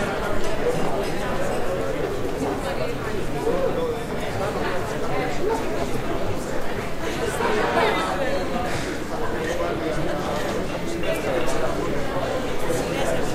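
A recording of sounds, with nothing technically wrong to report. No dropouts, distortion or other faults can be heard at any point in the clip.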